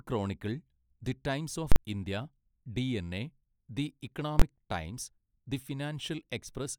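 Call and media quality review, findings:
Invalid numbers at full scale, speech path: a calculation returned infinite or invalid values, clamped to maximum output for a whole block. Heard as loud bangs at 1.72–1.76 s (about 43 ms, fits a 2048-sample block) and 4.40–4.42 s (about 21 ms, fits 1024 samples).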